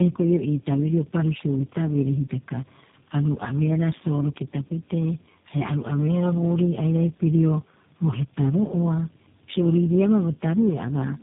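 Speech that has passed through tandem speech coding for its whole length. The roughness and warble point to three low-rate speech codecs in a row, the last likely G.729A, each re-encoding the previous one's damaged output. The sound is rough, muffled and warbly, with nothing above 3.8 kHz.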